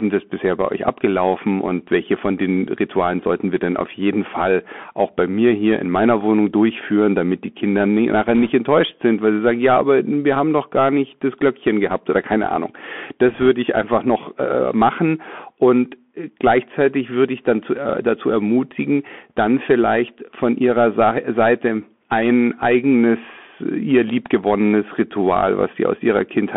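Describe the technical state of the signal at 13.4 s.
At 13.4 s the signal carries bit errors on a Bluetooth voice link. They run from 13.30 to 13.48 s, ending just before "ich einfach noch äh". Bits in the headset stream were flipped, at a rate somewhere around one percent. Each bit in this stream nudges the waveform only a small step, and the damage fades out quickly. So there are no sharp clicks. Instead the speech picks up a brief rushing, crackly noise.

That burst sits on top of the Bluetooth CVSD headset codec, which is present for the whole clip. The sound points to a 64 kHz one-bit stream that signals only up or down, with an adaptive step size. The band is narrow, roughly 200 Hz to 3.4 kHz. The damage is plainly audible. Sibilants turn scratchy, loud bright sounds overrun the step and distort, and a granular hiss lies underneath.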